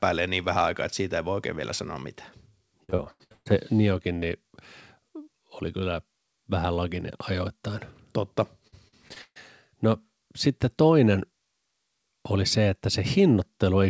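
A speech clip with repeated packet loss (robotic sound) from 2.84 to 3.48 s, just after "oikein vielä sanoa mitään", and again from 8.68 to 9.37 s: a string of dropouts, the longest about 140 ms, were patched by stretching earlier sound, leaving choppy fragments through the wideband call path, which stops at 8 kHz.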